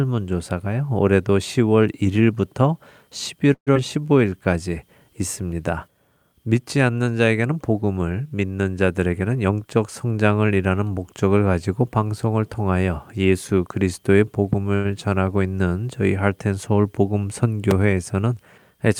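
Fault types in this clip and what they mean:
Call audio freeze: Around 3.53 to 3.69 s the speech stops moving forward for about 130 ms. The last sound is carried on briefly, then about 80 ms of it is silence. When the audio resumes it picks up exactly where it left off, with nothing lost, so the stream is now about 130 ms later than before. That pattern likely comes from packets being held up in transit until the jitter buffer ran dry.
Skip ahead: Right after that freeze, at about 3.75 s, playback jumps forward. Roughly 70 ms of speech is gone, and the two sides are joined with only a tiny 7 ms patch in between. It sounds like a clipped-off fragment rather than a gap. The jump also wins back about 70 ms of the delay the freeze had just added, as if the buffer dropped audio it had queued up.
Jitter buffer slow-down: From about 3.80 to 4.38 s the speech drags at about 88% speed, while the pitch stays where it was. 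The receiver is repeating single pitch periods or bits of pauses over and over to rebuild its reserve, which adds about 80 ms in total. Sounds in that stretch come out a little drawn out.
Jitter buffer speed-up: Between about 8.99 and 10.19 s things go the other way. The speech runs at about 111% speed with the pitch unchanged, so it comes across hurried. The receiver is trimming out short pieces of one or a few pitch periods, roughly 150 ms altogether, to bring the buffer's delay back down after it had built up more audio than it aims to hold.
Loud pop: There are two of these, one at 14.53 s and one at 17.71 s. Each is a single sharp pop peaking about 15 dB above the speech, and it lasts only a few tens of milliseconds. The speech carries straight on underneath, so the pop is added on top rather than replacing anything. A sudden voltage step is the likely cause, from a plug, a switch, static or a driver hiccup.
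Short stall from a late packet: At about 14.75 to 14.86 s, just after the first pop, a sound gets held about 90 ms too long, with a slight buzz or dip. A packet wasn't there when it was due, so the receiver stretched the last bit of audio until the packet showed up. It then carried on from the same spot with nothing missing, so the only cost is that extra 90 ms of delay.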